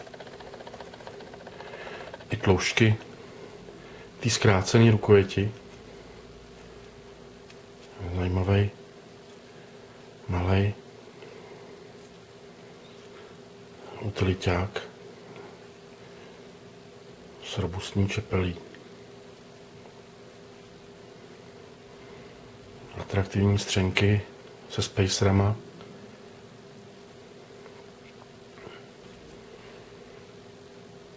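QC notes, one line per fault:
No fault to note; the G.722 call path carries the sound with nothing above 8 kHz, as that codec does.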